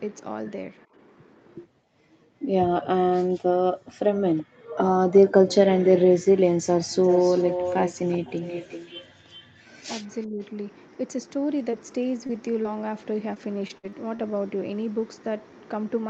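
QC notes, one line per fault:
4.36–4.43 s, 5.09–5.20 s, 6.62–6.66 s, 6.91–9.48 s, echo leak: a delayed copy of the speech arrives about 0.38 s late, at roughly 25, 20, 35 and 10 dB below the speech. The longest stretch is the loudest. The likely cause is a far-end echo canceller letting residual loudspeaker pickup through.
10.27–10.39 s, speech suppressed in double talk: the speech level dips by up to about 15 dB for around a tenth of a second. This is likely an echo canceller mistaking overlapping talk for echo and attenuating both.
11.59–14.24 s, scattered short gaps: about seven brief losses, the longest around 50 ms and 200 ms missing in total, are heard as small ticks and smears. The receiver filled each hole by extending the preceding sound.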